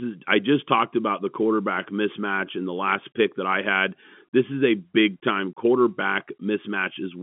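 No technical faults can be heard in this speech recording.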